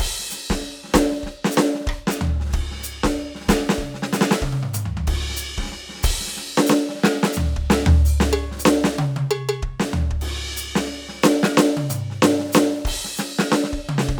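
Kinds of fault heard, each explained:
No technical fault can be heard anywhere in this music clip. There is nothing to list under any kind.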